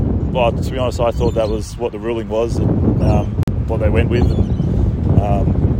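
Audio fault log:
3.43–3.48 s, gap at a join of encoded pieces: the sound drops out in a gap of about 45 ms, then resumes where it stopped. Two separately encoded pieces were joined untrimmed, so encoder start delay and last-frame padding remain, leaving a gap whose edges the codec smears.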